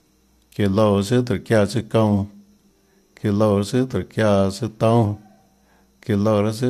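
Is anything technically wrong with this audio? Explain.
Yes. At 3.92 s there is an AAC frame loss with concealment. A stretch of coded audio about 10 ms long, consistent with a single low-delay frame, went missing. The decoder covered the gap by reusing the last good spectrum, which leaves a brief smeared, noisy blip in the speech. The speech also carries a light graininess, likely from the low-delay AAC compression it passed through.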